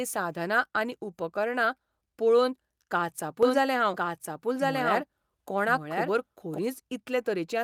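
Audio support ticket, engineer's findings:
Doubled audio track, 3.43 s to 6.59 s. Second full-band copy of the speech trailing about a second behind, roughly as loud as the original. Dry, no room tail, cuts in and out abruptly. Likely a second capture path or an edit stacking two out-of-step copies. Worth checking routing and the edit timeline.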